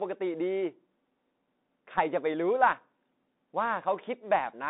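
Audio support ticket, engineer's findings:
Bluetooth CVSD headset codec, throughout: band 200 Hz–3.7 kHz, scratchy sibilants, granular hiss from one-bit step tracking. Plain telephone band-limiting would stay clean.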